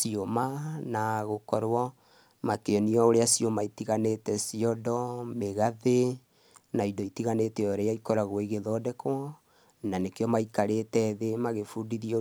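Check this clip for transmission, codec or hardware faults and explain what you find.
I find no faults in this clip.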